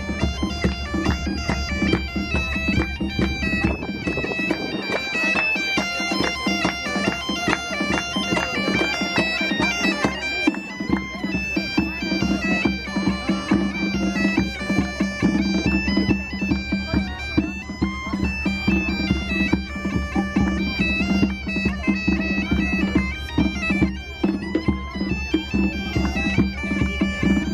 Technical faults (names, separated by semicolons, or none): none